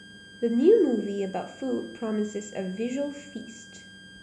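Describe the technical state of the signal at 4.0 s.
At 4.0 s a thin, steady high whistle near 1.6 kHz sits about 25 dB under the speech, wavering slightly in pitch, as it does throughout the clip. This is switching supply whistle: a power supply cycling in an audible burst mode or beating with another supply leaks its switching tone into the signal.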